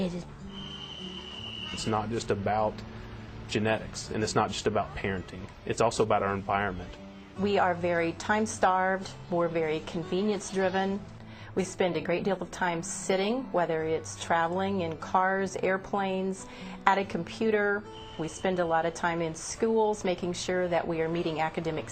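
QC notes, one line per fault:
throughout: clock drift between sender and receiver. The sending clock runs about 3% slow against the receiver's. The jitter buffer keeps draining, so the receiver must stretch the audio to cover the gap. Small timing hiccups recur at uneven intervals.
0.26–21.84 s: repeated timing corrections. The receiver repeatedly repeats short slices to stay in step, always in the same direction. Playback runs at 97% speed, adding about half a second overall. The result is faint stutters and a slightly unsteady, dragging tempo.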